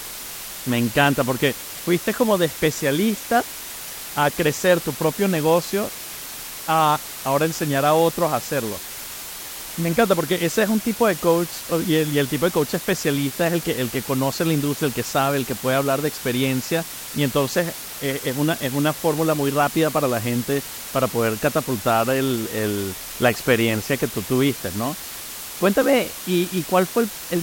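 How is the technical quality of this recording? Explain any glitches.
Technical quality is poor: a loud, steady hiss sits under the speech for the entire recording. The fault is low bit depth with dither, present throughout. The audio appears reduced to about 5 bits, with random dither added before rounding, so the rounding error becomes a constant, even white noise, roughly 15 dB below the speech. Unlike undithered truncation, there is no gritty distortion that rises and falls with the speech.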